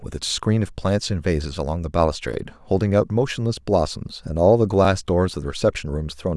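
The speech was handled in chunks about 2.5 s long, and each new chunk began before the previous one had finished. These are overlapping chunks: at every join about 13 ms of audio plays twice. That happens at 2.34 s and again at 4.85 s, about one chunk length later. Each join is heard as a brief click or tiny stutter, a momentary doubling that breaks the flow of the speech for an instant.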